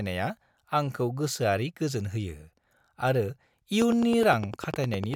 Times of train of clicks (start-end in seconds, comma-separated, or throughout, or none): 3.82-5.15